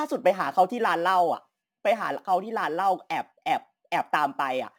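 From start to finish, the speech carries crude rate conversion. Samples seem to have been repeated rather than filtered, which fits a jump from 44.1 kHz to 48 kHz. The mismatch leaves a gritty, inharmonic fizz roughly 30 dB below the speech, riding on louder, brighter sounds.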